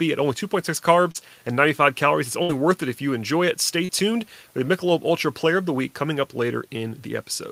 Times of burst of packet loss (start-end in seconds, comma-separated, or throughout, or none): 2.42-2.51